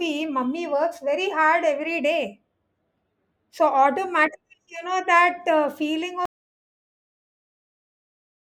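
At 6.25 s the speech cuts off abruptly in an audio dropout to silence that lasts to the end, about 2.15 s of silence with no room tone. The likely cause is a lost input, such as a disconnected device or a mute.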